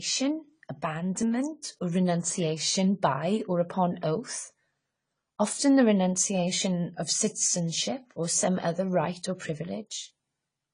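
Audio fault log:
throughout: AAC compression, likely at a low bitrate near 24 kbps; speech is audibly dulled and smeared, with the spectrogram showing a hard ceiling at 10 kHz.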